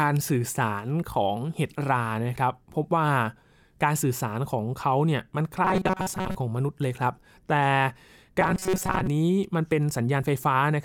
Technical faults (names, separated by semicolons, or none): robotic sound from repeated short buffers